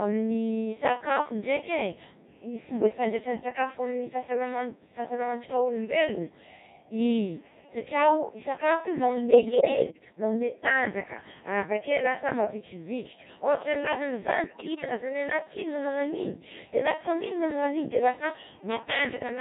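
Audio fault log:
Throughout: Codec 2 vocoder. The speech is rebuilt from sine waves driven by pitch, voicing, energy and spectral-envelope parameters rather than the original waveform, giving a heavily robotic, buzzy quality consistent with a low mode around 1.6 kbit/s.
9.32–10.12 s and 14.44–14.85 s: bit errors on digital voice radio. After "satri ao sakafo io", the synthetic voice jumps in pitch, level and timbre, breaking into warbles and gibberish until "manome tanjaka avakeo lasa". Flipped bits, several percent at the first burst and roughly ten at the second, corrupt whole-frame parameters.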